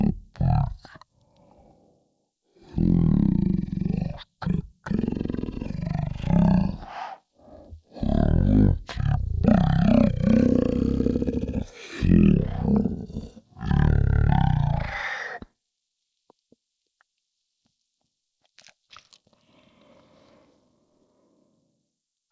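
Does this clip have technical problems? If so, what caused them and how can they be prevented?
Yes. The whole clip has a wrong sample rate problem: the speech runs at about 0.36 times normal speed and drops roughly 17.6 semitones, which fits 44.1 kHz audio being played back at 16 kHz with no conversion. To prevent it, make sure the playback rate matches the file's rate, or resample properly before playing.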